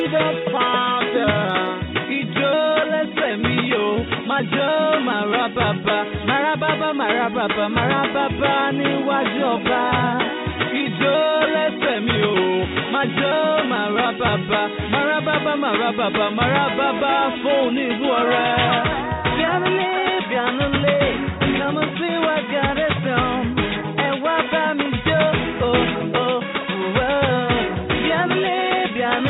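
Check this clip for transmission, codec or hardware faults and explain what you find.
There is one fault, running through the whole clip: MP2 compression damage, plainly audible from start to finish. The top end sounds dull, and a gurgling, granular roughness sits on what remains. That pattern points to MPEG Layer II coding at a low rate, likely around 80 kbps. Short of bits, the encoder drops upper sub-bands entirely, switching some on and off from frame to frame. It quantises the surviving bands coarsely, and that produces the grainy texture.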